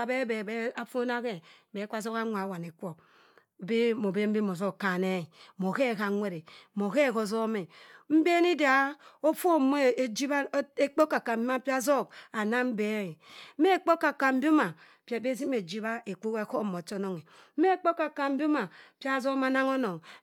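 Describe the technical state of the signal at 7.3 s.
At 7.3 s the speech signal is intact, with no audible fault at that moment.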